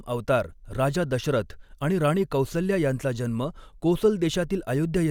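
No technical faults can be heard anywhere in this speech recording; the signal stays steady and intact throughout.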